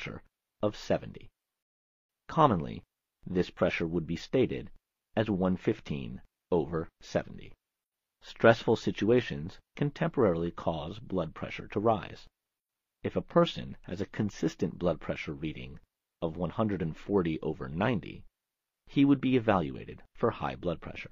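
A rebuffering stall runs from 1.63 to 2.09 s: playback exhausted its downloaded audio and halted until more data arrived. The sound drops to silence for about 464 ms, then picks up exactly where it stopped, so nothing is lost but the gap stretches the timeline.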